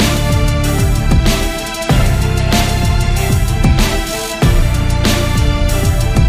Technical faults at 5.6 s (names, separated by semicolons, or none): none